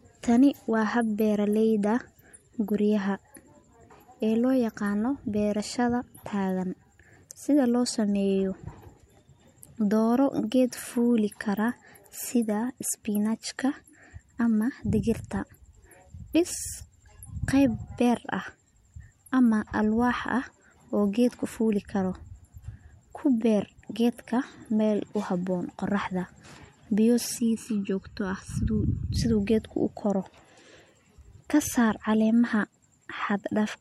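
From 27.4 to 29.2 s the speech turns hollow and phasey, the signature of channel delay (comb filtering). One channel arrives late by about 0.7 ms, and when the two are folded to mono the shared signal cancels at evenly spaced frequencies. The first notch sits at around 700 Hz, with further notches repeating up the spectrum at the same spacing, which thins the body of the voice and leaves a hollow, tube-like coloration for that stretch.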